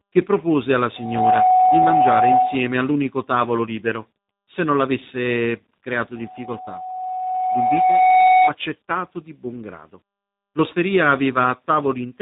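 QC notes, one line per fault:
throughout, tandem speech coding: speech passed through a CVSD stage, then G.711, then G.729A, so each coder reworked the last one's damage, leaving it rough, warbly and dull, with nothing above 3.8 kHz.
0.95–2.85 s, loudspeaker feedback squeal: the microphone picked up its own loudspeaker and the loop gain at 742 Hz exceeded one, so a steady tone rose within about a third of a second to about 5 dB above the speech, from after "che propose alla" until "tavolo libero se non".
6.15–8.55 s, loudspeaker feedback squeal: the same 742 Hz loop built up again, more slowly this time, over about two seconds, after "se non l'avesse creato", swelling to about 10 dB above the speech.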